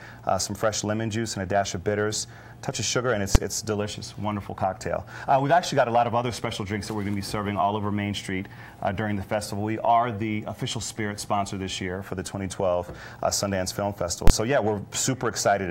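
At 3.35 s and again from 14.27 to 14.30 s, invalid numbers at full scale appear. A calculation failed, and the output jumps to one extreme value. The short block sounds like a single bang. The longer one gives a loud pop at each edge with silence between.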